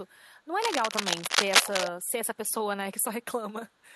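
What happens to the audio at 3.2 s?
Nothing goes wrong at 3.2 s: the audio there is intact, with no dropout, click, distortion or other fault to be heard.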